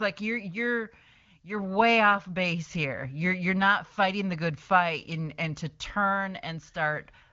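No technical faults occur anywhere in this speech, which comes through an AMR wideband (HD Voice) codec path with nothing above about 7.2 kHz.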